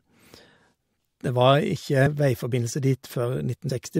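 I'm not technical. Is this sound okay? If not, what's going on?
No. At 2.05 s and again at 3.69 s the speech briefly jumps forward. This is compressed frames skipped: small chunks of the stored audio were lost or rejected, so playback leaps ahead, roughly 150 ms the first time and about 70 ms the second, fitting 24 ms chunks. Unlike a dropout, there's no silent gap.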